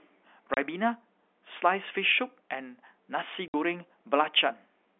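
Hard-edged dropouts cut the speech at 0.54 s for 30 ms and at 3.48 s for 60 ms, consistent with 30 ms packets lost and replaced with silence: packet loss filled with silence.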